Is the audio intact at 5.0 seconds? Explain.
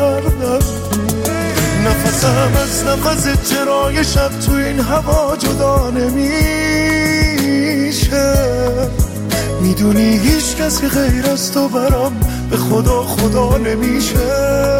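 Yes, the audio is intact at 5.0 seconds, with no dropout, click, distortion or other fault at that moment.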